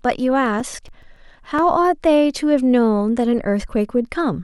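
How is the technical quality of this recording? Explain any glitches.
The recording has one clear fault: CD scratch ticks through the early part of the speech.

From 0.32 s to 1.73 s there are 11 ticks, a steady run of about seven or eight per second. A scratch on the disc wipes out more data than error correction can rebuild, once per rotation, so the player patches or mutes a few milliseconds each turn. They sound like regular clicks or tiny dropouts. A spectrogram shows thin, evenly spaced vertical lines. The waveform shows brief spikes or flattened notches.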